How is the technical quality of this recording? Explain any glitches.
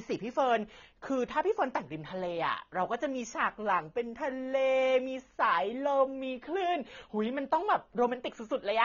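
The recording is held back by heavy lossy compression that runs through the whole clip and is plainly audible. The system fault is likely AAC compression at a low bitrate, something near 24 kbps. To fit that budget the encoder discards everything above about 6.9 kHz and quantises the remaining frequency lines coarsely against its hearing model. The speech sounds dull and smeared, with a watery, fizzy texture on sibilants and sustained sounds.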